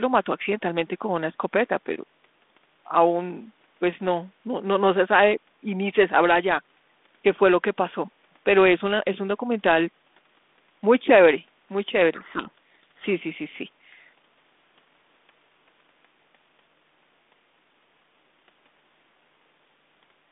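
A codec payload misread runs from 12.14 to 13.07 s: the receiver unpacks the G.726 code words with their bits in reversed order, so each decoded difference is wrong and the speech disappears under harsh, grinding distortion until the packing matches again.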